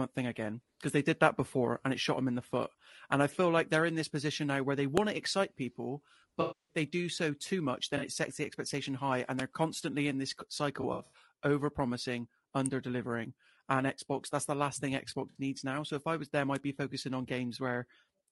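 The whole recording has a rough, grainy texture, with noise filling the gaps between harmonics and a thin, synthetic-sounding top band. This is plainly audible codec damage, most likely from low-delay AAC compression (AAC-ELD) at a low bitrate around 32 kbps, where short frames resolve pitch poorly.

At 4.97 s a sharp snap sits on top of the sound. It is an electrical switching spike, probably a nearby switch or discharge arcing into the line. Similar snaps recur at 9.39 s, 12.66 s and 16.55 s.

AAC frame loss with concealment appears from 6.41 to 6.76 s. The decoder fills in from the last good spectrum, and across these 280 ms the patch turns smeared and noisy and sags in level. Shorter phasey blurs follow at 7.97 to 8.03 s and 15.29 to 15.38 s, which fits 20 ms frames. Between 10.81 and 11.22 s the losses are scattered, with the longest gap about 70 ms.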